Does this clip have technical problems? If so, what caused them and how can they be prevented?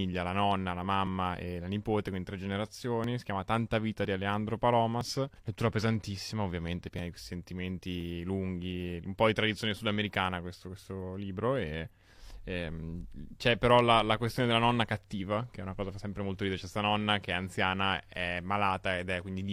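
Yes. The speech skips twice, with a jolt in the sound at 3.04 s and again at 6.99 s, where roughly 30 to 40 ms of audio goes missing each time. This is an overlap between stream segments: the delivery is cut into 1-second segments, and at these two joins the time stamps of neighbouring segments overlapped. The player trimmed the overlap as duplicate audio even though nothing was really doubled, so the waveform jumps across the gap. To prevent it, make the segmenter stamp each segment so it begins exactly where the previous one ends.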